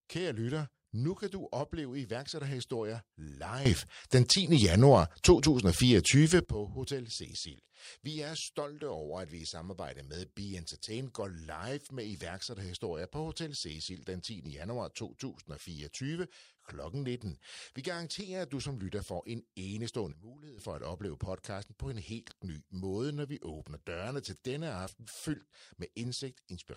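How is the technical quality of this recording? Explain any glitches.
The recording has two sudden gain jumps in this speech. From 3.65 to 6.45 s, the speech and the background noise both snap up by about 15 dB, then drop back. From 20.12 to 20.58 s, the level falls by about 15 dB, then returns. Each change is instant, with no fade, so the floor lurches along with the speech. The likely cause is a gain setting applied between one sample and the next without a ramp.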